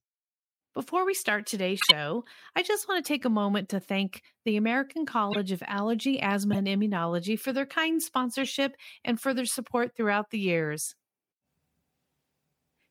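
Brief chirps and noise bursts hit the speech at 1.80, 3.04, 5.30, 6.53 and 8.38 s, loudest after "we start today's": corrupt frames decoded, their flipped bits putting energy at the wrong frequencies.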